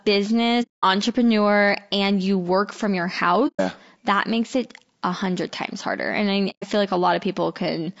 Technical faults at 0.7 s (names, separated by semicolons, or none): low-delay AAC compression; AAC frame loss with muting